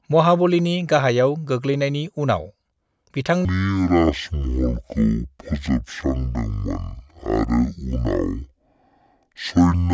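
A speech clip that, from 3.45 s to the end, suddenly drops into a slow, heavy drawl, with everything running at half speed and sitting a full octave (12 semitones) lower. This is a wrong sample rate fault. The samples are played back at half the rate they were captured at, with no conversion, so timing stretches and pitch falls together by the same factor of two, which fits 32 kHz audio being played as 16 kHz.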